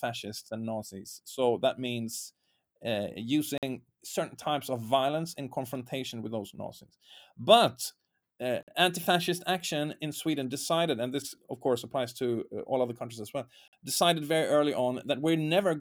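A speech clip with a gap between chunks: the sound cuts to hard-edged silence for 50 ms at 3.58–3.63 s (between "that means uh" and "certain types of violence"), 8.63–8.68 s (before "anti fascist action in"), and 13.68–13.73 s (after "other countries as well"). The even 5-second spacing points to audio delivered in 5 s pieces with dead air inserted at each join.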